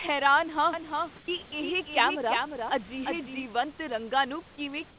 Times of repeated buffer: none

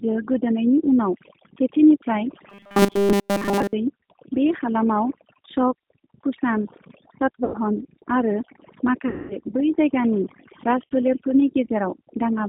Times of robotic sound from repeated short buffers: 2.50-3.73

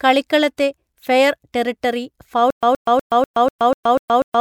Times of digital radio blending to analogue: none

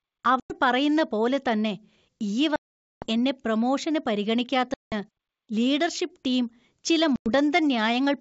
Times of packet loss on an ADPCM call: 0.40-0.54, 2.56-3.06, 4.74-4.94, 7.16-7.30

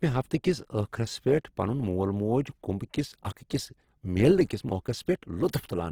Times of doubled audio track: none

